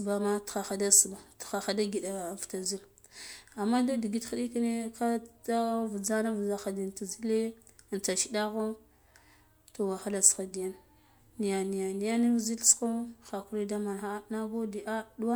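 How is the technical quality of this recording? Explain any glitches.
No audible technical faults.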